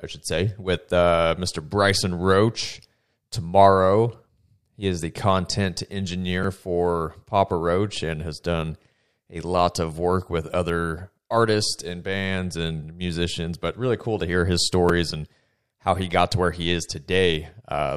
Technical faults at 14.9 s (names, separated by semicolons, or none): repeated buffer